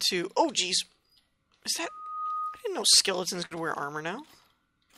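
At 3.45 s a burst of packet loss interrupts the audio until about 3.53 s. Several consecutive packets failed to arrive in time, and the receiver's concealment held the last received sound for roughly 52 ms while steadily attenuating it, producing a brief sustained buzz or hiss that fades. When playback resumes it has skipped ahead, so about 60 ms of the original signal is simply absent, giving an audible jump in continuity.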